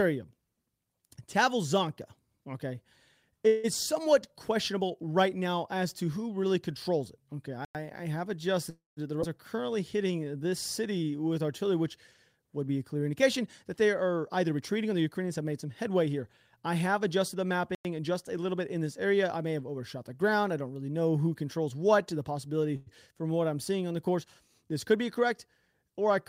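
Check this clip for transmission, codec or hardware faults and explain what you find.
Several transmission faults are audible in the speech: three call audio freezes, two gaps between chunks, one skip ahead, and a stretch each of jitter buffer slow-down and speed-up.

Call audio freeze occurs at 3.47 to 3.66 s, at 8.70 to 8.99 s just after "I have", and at 22.76 to 22.89 s between "controls what to the" and "from what I'm seeing". At each one the sound stalls and the last sound is drawn out as a fading buzz or hiss for 164 ms, 271 ms and 103 ms. The second fill decays into about 170 ms of silence. The cause is likely late packets emptying the jitter buffer, with the receiver extending the last sound until audio resumed from where it stopped, so nothing is lost.

Gaps between chunks fall at 7.65 to 7.75 s, just before "I have", and at 17.75 to 17.85 s. Each is a 100 ms hole, and the two are spaced 10 s apart. 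That regular spacing fits audio delivered in 10-second chunks, with silence inserted at each join by padding or a late start of the next chunk. No audio is lost there, but the flow breaks abruptly.

A skip ahead at 9.21 s drops about a fifth of a second of speech. The audio on either side is spliced with only a few milliseconds of fill between them. This is audio discarded in transit or by an overflowing buffer while later audio was already queued, so playback lurches forward instead of pausing.

Jitter buffer slow-down runs from 9.56 to 11.35 s. Speech plays at 88% speed with pitch unchanged, and 226 ms of material is added by repeating single pitch periods and pause fragments. This rebuilds the buffer reserve right after the skip, and it is heard as drawn-out, slightly stretched delivery.

Jitter buffer speed-up spans 13.22 to 19.44 s, at 107% speed with pitch unchanged. Roughly 0.4 s in total is trimmed as repeated cuts of a pitch period or so. 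The receiver does this to shed excess buffered delay, and the speech over that stretch sounds hurried.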